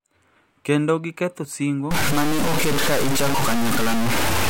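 Right after "giketho singo", at 1.91 s, the speech turns harsh and grainy to the end: low bit depth without dither, likely truncation to about 3 bits, with distortion roughly as loud as the voice.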